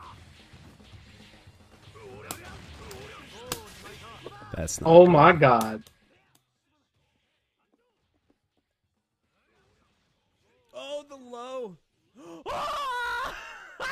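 From 5.72 to 6.39 s there's zipper noise: the level drops by roughly 25 dB in coarse unsmoothed steps, around seventy a second, so each jump clicks and you hear a fast ticking buzz riding the sound while it fades.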